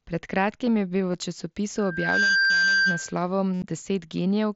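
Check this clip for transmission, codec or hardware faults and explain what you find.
Two kinds of fault are audible: a feedback squeal and concealed Bluetooth packet loss, heard through a wideband mSBC headset link.

Loudspeaker feedback squeal runs from 1.76 to 3.15 s. A steady tone at 1.6 kHz swells over about half a second and sits roughly 5 dB above the speech. The microphone is hearing its own loudspeaker. At that frequency the loop gain exceeds one, so the tone feeds itself.

Concealed Bluetooth headset packet loss occurs at 1.12 s, 2.43 s and 3.54 s. The gaps last 22.5, 67.5 and 82.5 ms, consistent with runs of 7.5 ms frames. The receiver filled each gap by repeating a recent stretch of waveform. Each gives a buzzy held tone and a slight warble as real audio returns.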